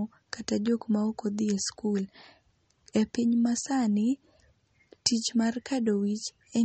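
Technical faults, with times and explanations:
Throughout, MP3 compression: there's nothing above about 8.4 kHz, so the top end sounds dull and the s sounds lose their edge. What's left has that watery, swirly texture, with metallic chirps on the sibilants and softened attacks. That's likely a starved MP3 encoder. It chopped the treble at a fixed point, and the weak frequency lines it zeroed flicker on and off from frame to frame. The damage points to a low bitrate, around 32 kbps.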